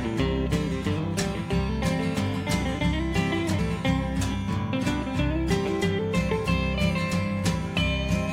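Damaged data in the compressed stream causes a brief glitch at 3.58 to 3.60 s. Corrupted bytes there make the decoder misread frames and lose sync.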